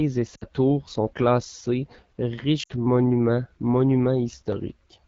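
AMR wideband (HD Voice) codec damage runs through the whole speech clip, plainly audible as a rough, raspy texture. The coder models speech up to 6.4 kHz with a pulse-driven vocal tract and fills the band above with shaped noise, and its coarseness fits the low 8.85 kbit/s mode. Lost AMR speech frames occur at 0.36 to 0.44 s and again at 2.63 to 2.71 s, each gap about 60 ms, which fits three 20 ms frames. The decoder repeats the last good pitch and vocal tract settings with falling gain, so the sound drops to near silence within two frames before returning rough for a moment.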